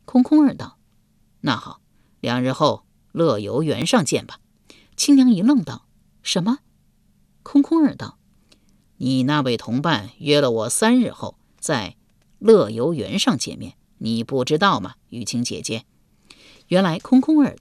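At 3.82 s, fresh audio failed to reach the output in time, so the device played its last buffer once more: a repeated buffer. The repeated slice is only about 1.45 ms long, which fits a 64-sample buffer, and essentially nothing of the speech is lost. The single extra play, with hard joins at each edge, comes through as one brief click.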